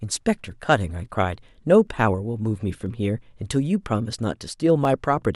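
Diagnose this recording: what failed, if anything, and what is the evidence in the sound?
Clock drift buffer slips at the driver or buffer stage: about five clicks, one every 0.99 s from 0.88 to 4.85 s, likely from mismatched device clocks. Each appears as a thin vertical spectrogram line.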